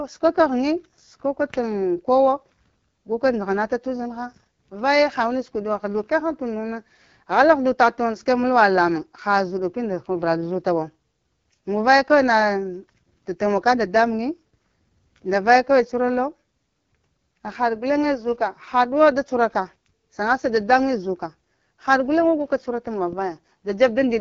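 AMR wideband (HD Voice) codec damage runs throughout this speech: raspy, rough coding with nothing above 7.5 kHz, consistent with one of AMR-WB's lowest bitrates, likely around 8.85 kbit/s.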